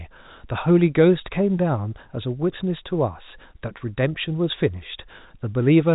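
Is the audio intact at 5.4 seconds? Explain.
Yes, at 5.4 seconds the speech is intact, carrying only the ordinary narrow band of G.711 telephone coding with nothing above about 3.8 kHz.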